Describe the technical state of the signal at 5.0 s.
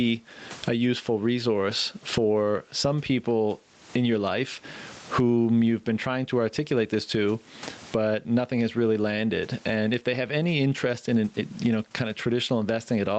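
Gain pumping is present at 5.0 s, as throughout the clip: the gain swings by about 20 dB, pulled down under each louder speech sound. This squashed, breathing level is likely caused by excessive input gain driving a fast limiter or compressor.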